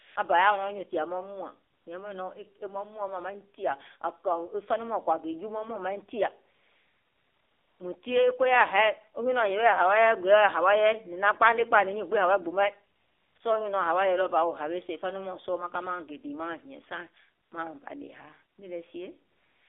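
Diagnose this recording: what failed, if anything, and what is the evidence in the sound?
The codec stage shows the AMR narrowband mobile codec throughout. Speech is confined to roughly 300 Hz to 3.6 kHz and has a plainly audible buzzy, synthetic texture, which fits a low 7.4 kbps mode. Each 20 ms frame is rebuilt from a vocal-tract model and sparse pulses.

AMR comfort noise appears in the call-processing stage. The transmitter's voice-activity detector stopped sending speech frames, and the receiver inserted smooth synthetic noise. This happens at 0.00–0.16, 1.72–1.86, 6.56–7.80, 12.96–13.36, 13.38, 17.44–17.52, 18.56 and 19.32–19.69 s, where steady noise switches in and out.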